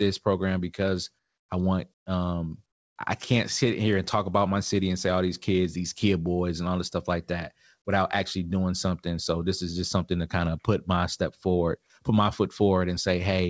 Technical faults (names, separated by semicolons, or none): comfort noise in place of the background